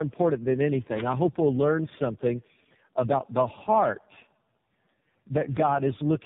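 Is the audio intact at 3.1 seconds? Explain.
No, tandem speech coding runs through the whole clip, including 3.1 s. The sound points to three speech codecs in a row, each re-coding the previous one's output. The result is rough, muffled and warbly, with nothing above 3.7 kHz.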